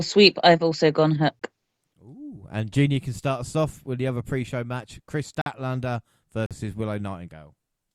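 The time stamps of consecutive one-second stream segments fail to line up in three places, producing a gap between stream segments that the player fills with silence. The speech drops out abruptly with hard edges from 1.39 to 1.42 s (about 21 ms), from 5.42 to 5.46 s (about 47 ms) and from 6.46 to 6.51 s (about 45 ms). Each hole is inserted time, so no speech is lost, only interrupted.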